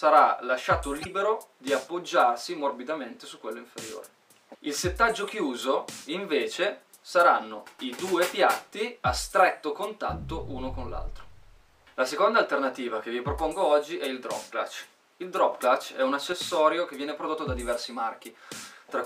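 Damaged data in the compressed stream between 0.98 and 1.07 s makes the decoder lose frame sync and hunt for the next header, leaving a brief glitch. At 15.52 s a sudden gain jump, likely an unramped digital gain change, lifts sound and background noise together by about 4 dB until 16.32 s.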